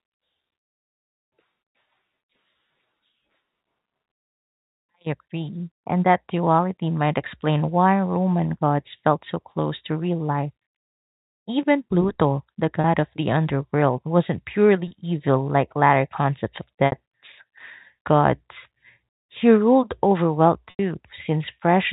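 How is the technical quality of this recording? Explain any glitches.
Four short glitches stand out in the telephone-band sound, which tops out at 4 kHz as you'd expect from G.711 coding. They're packet loss with pitch repetition: at 12.81 s (just before "of the underworld wasn't") and at 14.88 s, each about 30 ms; at 16.86 s, right after "latter concepts of", about 60 ms; and at 20.7 s, after "ruled over wealth", about 90 ms. When audio goes missing, the receiver loops the last pitch period and fades it out, so the two short gaps come across as a quick buzzy hold. The longer two sag toward silence before the speech cross-fades back in.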